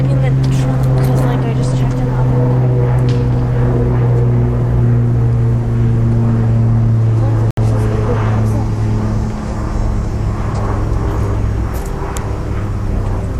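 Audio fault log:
7.51–7.57 s Bluetooth dropout: 67 ms silence, a flat waveform and blank spectrogram column from likely lost wireless packets; sound resumes mid-stream.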